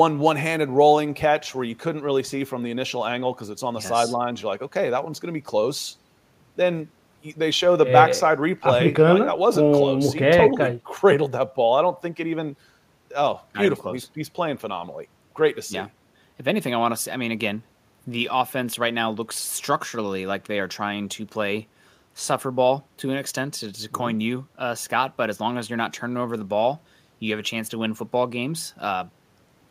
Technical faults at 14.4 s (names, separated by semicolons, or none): none